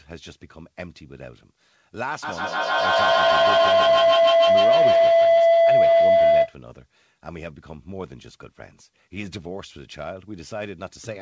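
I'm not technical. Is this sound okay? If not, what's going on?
No. A feedback howl runs from 2.23 to 6.59 seconds. Two devices on the same call were close enough that one's microphone picked up the other's loudspeaker, so the sound kept looping round, getting louder each trip instead of fading. It narrowed into a piercing tone around 700 Hz that rises well above the speech, with one trip round the loop taking roughly 150 ms, until the loop breaks.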